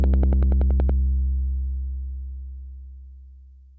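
From 0.04 to 0.90 s, a train of clicks ticks at a regular 10.5 per second, roughly ten pulses well above the sound, likely interference from nearby equipment.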